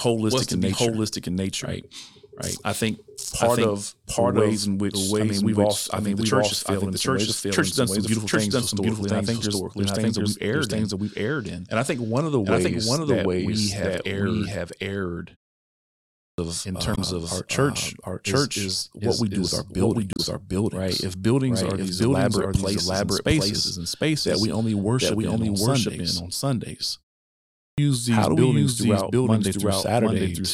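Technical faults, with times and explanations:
Throughout, doubled audio track: A second full-band copy of the speech runs about 0.7 s behind the first, at roughly the same level. It has no decay or room colour. A second capture path or a misaligned edit is the likely cause, leaving two copies out of step.
15.89–16.38 s and 27.34–27.78 s, clipped start after a pause: Speech resumes abruptly out of silence, missing its opening sounds. About 0.49 s is lost after a 0.61 s pause, and about 0.44 s after a 0.39 s pause, just before "these buildings". The output device sleeps during pauses and wakes too slowly.
16.93–16.99 s and 20.13–20.20 s, damaged data in a compressed stream: Brief blips cut through the speech. The first comes just before "our church is is", and the second just after "we do with our". Corrupt bytes made the decoder misread frames, lose sync and jump to the next frame header.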